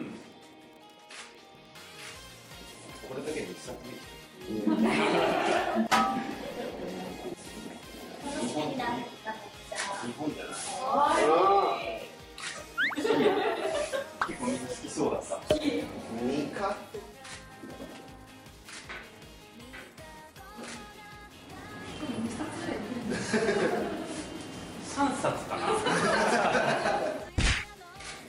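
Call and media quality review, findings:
Wi-Fi interference, throughout: faint ticking roughly ten times a second, 102.4 ms beacon period. Nearby Wi-Fi radio's beacon bursts rectified by the audio circuit, roughly 40 dB below signal.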